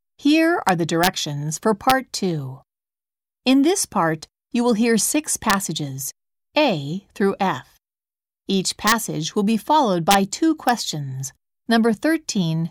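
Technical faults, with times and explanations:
0.69–1.07 s, 1.90 s, 5.50–5.53 s, 8.87–8.92 s, 10.11–10.14 s and 10.69 s: integer overflow. Loud speech peaks push only about 1 dB past full scale, but instead of being limited they wrap to the opposite sign, so each one snaps into a harsh crack far sharper than ordinary clipping.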